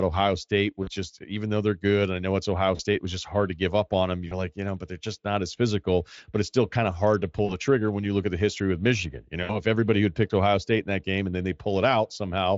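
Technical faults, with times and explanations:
0.83–0.89 s, 2.75–2.81 s, 4.27–4.49 s, 7.45–7.55 s, 9.43–9.61 s: VoIP packet loss concealed by the speech codec. There are 40 ms gaps, and a 60 ms gap at 9.43 s. The decoder fills each gap by extending the last pitch and filter into a fading sound rather than leaving silence, which sets these apart from plain dropouts. The damage lingers briefly after each gap, longest at 4.27 s.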